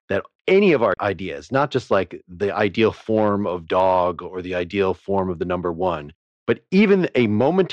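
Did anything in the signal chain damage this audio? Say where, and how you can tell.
Yes. The speech has hard clipping: its peaks were cut flat where the level exceeded what a converter or fixed-point sample format could pass. Loud stretches at 1.55 to 1.97 s, 2.61 to 3.28 s, 3.76 to 4.03 s and 6.50 to 7.61 s are overdriven by about 2 dB and carry a crackle on the peaks. Shorter ticks at 5.18 s and 5.87 s are about 1 dB over. The flattened tops generate high harmonics, which is where the crackle comes from.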